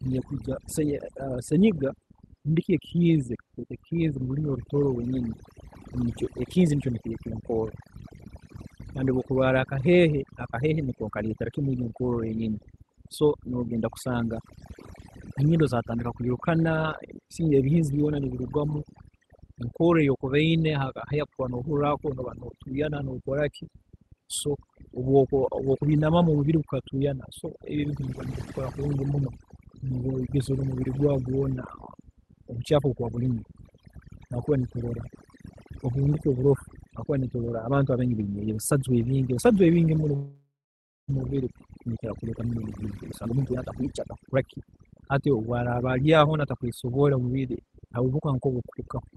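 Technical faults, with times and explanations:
Throughout: overdone noise removal. Bands near the estimated noise floor are pushed down hard, taking quiet parts of the speech with them, so pauses fall to near silence with twinkling specks. A spectrogram shows sparse, isolated bright dots between syllables.
40.15–41.10 s: call audio freeze, between "ebisajwa ebingi muno" and "mumubiri nibikira". The last sound is stretched into a fading buzz and then goes silent for about 0.56 s before the speech resumes with nothing lost. The likely cause is delayed packets draining the jitter buffer. The waveform shows a decaying tail and then a flat gap.
42.28–46.38 s: jitter buffer speed-up, from "ebingi muno mumubiri nibikira" up to "atakweesobola omubiri". Speech runs about 23% faster at unchanged pitch and sounds hurried, as roughly a second of short pitch-period pieces is cut out to shrink the built-up delay. 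The waveform shows compressed syllables and tiny splice points.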